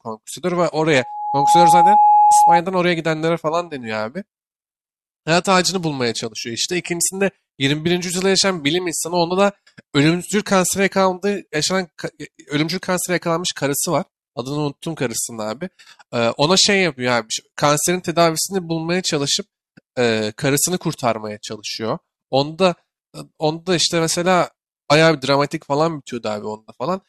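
From 0.90 to 2.62 s, loudspeaker feedback squeal: a steady tone near 837 Hz swells within about 0.7 s to roughly 10 dB above the speech. The microphone is re-amplifying its own loudspeaker, and loop gain above unity at that frequency lets it build unchecked.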